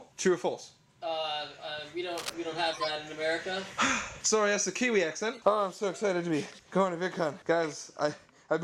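From 2.15 to 2.31 s there's a short scratchy rustle sitting about 10 dB under the sound, likely cable scratch noise from a worn lead or connector being jostled. Then a corrupt frame decoded at 2.73 to 2.91 s: damaged compressed data played anyway, giving a fairly loud squeaky burst spanning what sounds like a few frames. A second, much fainter single-frame blip follows at 5.33 to 5.40 s.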